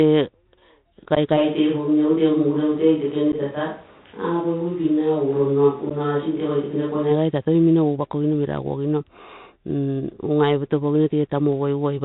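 Throughout, the audio has passed through the Bluetooth CVSD headset codec, a narrowband link that codes each sample as a single up-or-down bit at 64 kbps with an adapting step size. The damage is plainly audible. Nothing above 4 kHz survives, so the speech sounds boxed-in and muffled. Sibilants come out scratchy, louder high-frequency sounds smear where the step size cannot keep pace, and a fine granular hiss sits under everything.

From 1.15 to 1.18 s there is unconcealed Bluetooth headset packet loss. A few voice packets between headset and phone failed to arrive, and nothing was done to hide the gap, leaving a 15 ms hole with hard edges.

At 1.38 s the sound is likely the result of a switch to a distant microphone, with the close pickup dropping out in favour of one further away. The change is abrupt. The speech turns hollow and roomy and loses its low end, and background noise rises to roughly 30 dB below the speech, though the overall level stays about the same. 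This character holds until 7.09 s, when the close sound snaps back just as suddenly.

Inside that stretch the same unconcealed packet loss returns twice, at 3.32 s and again from 5.90 to 5.92 s. Each drop removes 11.2 ms of audio, a brief sharp-edged dropout in the speech.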